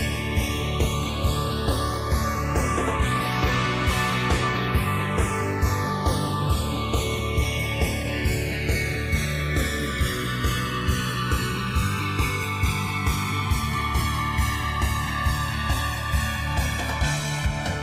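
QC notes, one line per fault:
Throughout: channels drifting apart. The two channels run on slightly mismatched clocks, around 100 ppm, so the delay between them slowly grows to roughly 1.5 ms. Summed to mono, comb-filter notches glide through the spectrum, giving a slow flanging sweep.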